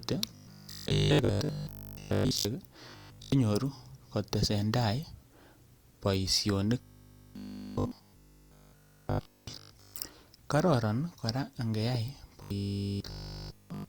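Audio is most likely arriving too seldom for playback, so the software keeps repeating its last short buffer, about 20 ms long, and skips the real audio. This gives robotic sound from repeated short buffers at 0.35–2.45 s, 2.90–3.32 s, 6.81–9.95 s and 12.42–13.88 s. Each stretch sounds like a rigid, metallic buzz pinned at 50 Hz that still loosely tracks the speech. In the first stretch only around 70% of the audio is replaced, so some natural speech shows through. The later stretches are buzz throughout.

At 11.95–11.97 s, a sudden voltage step or pulse, likely from a switch, static or a driver glitch, enters the signal and causes a single loud pop. It rises to about 5 dB above the speech, heard as one sharp click-like thump, with the speech continuing underneath.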